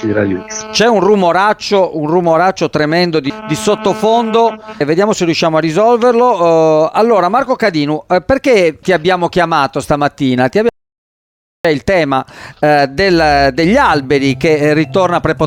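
The audio has one fault, an audio dropout to silence, from 10.69 to 11.65 s. The sound cuts off abruptly mid-flow and returns just as suddenly. For about 0.96 s there is nothing at all, not even room tone, so the gap is silent. Whatever happened in that stretch is lost. The likely cause is a brief loss of the input signal, such as a disconnected device, a failed link or an accidental mute, while the recorder kept writing silence.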